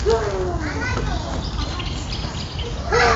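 A short recording of everyday sounds, with no technical fault to be heard anywhere in it. Nothing in the audio needs a cause or a time marked against it.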